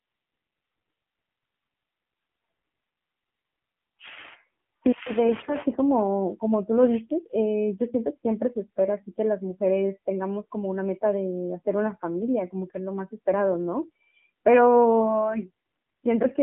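From start to finish the speech passes through the AMR narrowband mobile codec, cut to roughly 200 Hz to 3.4 kHz, buzzy and synthetic at a low rate near 7.4 kbps, unlike plain band-limiting. From 5.28 to 5.57 s, AMR bit errors scatter the excitation pulses and parameters, turning the voice hoarse and gargly while pitch and level hold, unlike a dropout.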